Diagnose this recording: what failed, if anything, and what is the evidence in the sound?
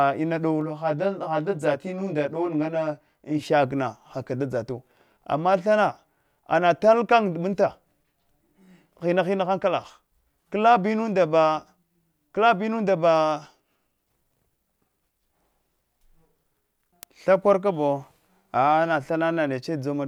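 Channel delay (comb filtering) affects the speech from 0.61 to 3.43 s. It most plausibly arises in the driver or buffer stage. One channel arrives roughly 20 ms late, which fits a buffer-sized offset. When the two are folded to mono, shared content cancels at evenly spaced frequencies, starting near 30 Hz and repeating about every 50 Hz. This gives a rough, slightly doubled sound. The notches stay fixed, which distinguishes it from a sweeping flanger or from smeared room reverb.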